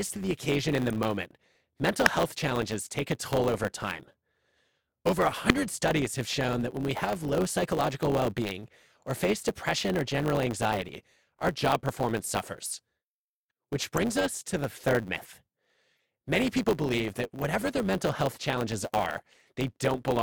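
Throughout the speech, a block size mismatch (truncated) discards the tail of every block, which fits one stage writing 512-sample blocks. This produces a steady 100 Hz buzz, and the speech runs 1.07 times fast.

A corrupt frame decoded appears as brief chirps or blips at 0.9, 2.06, 5.5 s (just before "studies have shown that"), 7.28 s (between "that when we have" and "psychological well being or"), 13.97 s (just before "us to the third"), 15.97 to 15.99 s, and 17.41 s. Each burst spans one to four damaged frames whose misread codes spray energy into wrong frequencies. The ones near 2.06 and 5.5 s are loudest, and the one near 15.97 s is barely audible.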